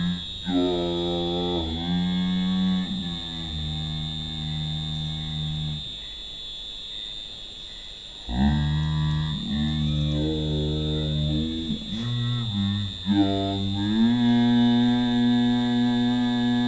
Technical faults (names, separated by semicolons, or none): wrong sample rate